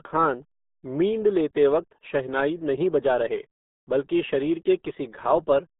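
Speech run through the RealAudio 14.4 codec, the old RealAudio 1 dial-up format, for its whole length. Its low-bitrate coding discards most spectral detail and keeps only a narrow telephone-like band, roughly 200 Hz to 3.6 kHz, with nothing above 3.8 kHz, which fits an 8 kbit/s stream. The damage is heavy: the voice comes out muffled and thin, with a gargling, bubbly roughness wherever the codec struggles to model it.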